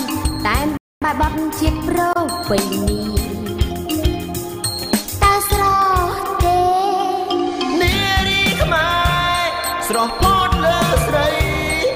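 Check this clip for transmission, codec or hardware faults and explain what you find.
One fault is present: a playback stall from 0.77 to 1.02 s. The player was likely starved of data or had its output thread blocked, so nothing reached the output for about 245 ms. The sound cuts to silence mid-flow, then resumes after the gap.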